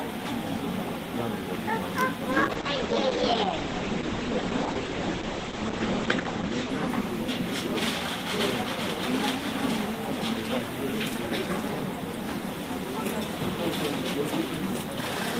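A call bitrate drop hits this recording of everyday sound from 2.33 s to 8.17 s. The encoder is starved of bits, consistent with a fall from roughly 40 kbps to about 9 kbps, so the sound turns coarse and watery. High frequencies above 8 kHz vanish, and it stays at its roughest for about 3.8 s before recovering.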